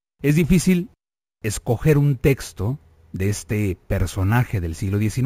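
From start to finish, the speech carries a bright, metallic fizz riding on top of it, swelling and fading with the sound's own level. This is imaging from sample-and-hold upsampling: each sample was simply repeated without a smoothing filter, so mirrored copies of the spectrum sit above the original band. The first image spans 8 to 16 kHz at about 22 dB below the signal, which fits a 16 kHz source raised to 44.1 kHz.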